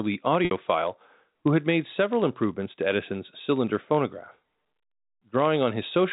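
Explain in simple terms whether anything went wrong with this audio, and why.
Two things went wrong. Throughout the speech there's a steady buzz at about 91.5 Hz, caused by a block size mismatch (padded). One stage hands over blocks that are too short, so each gets topped up with silence. That also makes everything run very slightly slow, about 0.4%. Then from 0.45 to 0.51 s, roughly 60 ms went missing in a packet loss with pitch repetition. The receiver filled the hole by repeating the last bit of voice and fading it out, so the sound dies away there before the speech comes back with a short cross-fade. The telephone-style G.711 coding underneath is just narrowing the sound the way a phone line does.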